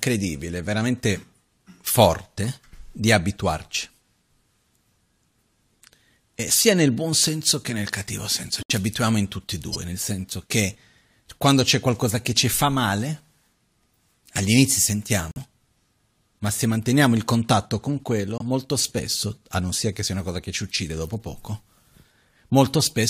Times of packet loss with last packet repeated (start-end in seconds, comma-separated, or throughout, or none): none